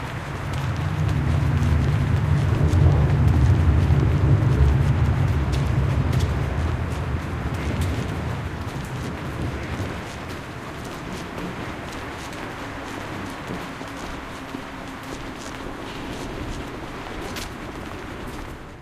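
No technical faults can be heard anywhere in the recording, and the signal stays intact and continuous throughout.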